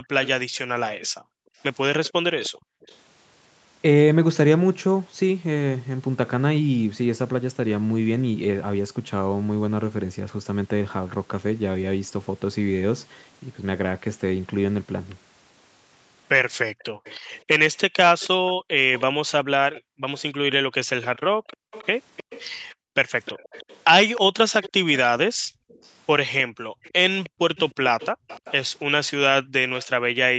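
Background gated by the echo canceller comes first, between 0.0 and 2.81 s. While the far side's audio plays out of the loudspeaker, the canceller clamps the microphone path, and the room tone behind the speech sinks by up to about 40 dB, for roughly a second in all across that span, before springing back once the canceller releases.

Echo leak overlaps it, from 0.24 to 2.98 s: a faint second copy of the speech trails the original by 310 ms, sitting about 20 dB below it. What is heard is a delayed shadow of the speech, likely because the other end's echo canceller failed to strip its loudspeaker's output from its microphone and sent that residue back down the line.

The echo leak returns at 16.79 s and continues to the end of the clip at 30.38 s, with the same 310 ms lag and roughly the same level, about 20 dB under the speech. That constant delay points to the same acoustic loop, likely the same loudspeaker-to-microphone path at the far end, so the trailing copy recurs behind the speech in the closing stretch.

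Background gating recurs inside that stretch: from 16.9 to 22.95 s, for around a second and a half in total; from 25.33 to 28.28 s, for about a second; and briefly from 29.93 to 30.13 s, a 0.2 s dip. Each drop reaches about 40 dB, so the ambience repeatedly dies away and returns as the canceller grabs and releases the microphone. The audio stops at 8 kHz throughout, which fits an Opus call path running at wideband bandwidth.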